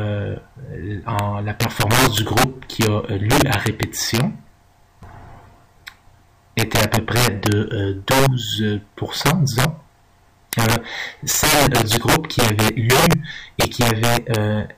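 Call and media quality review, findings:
Sharp cracks on loud peaks throughout: integer overflow. Probable gain or mix stage about 11 dB overdriven without clamping; a few percent of samples wrap to opposite sign. Waveform: peaks flipped full-range. Spectrogram: broadband vertical streaks per crack.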